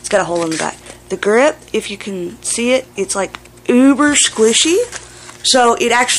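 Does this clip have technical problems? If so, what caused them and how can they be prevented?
Yes, there's hard clipping from 3.70 to 4.63 s and 5.48 to 6.10 s, with peaks driven about 3 to 4 dB over and flattened into crackly harmonics. Pull the gain down before that stage so the loudest peaks keep some headroom.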